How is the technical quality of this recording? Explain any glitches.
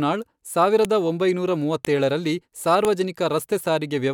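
The recording has a recurring glitch: file header played as audio, at 0.85, 1.85 and 2.85 s. The speech was assembled from one-second pieces whose headers were never stripped, so those header bytes play as samples, producing a sharp, loud click at each joint.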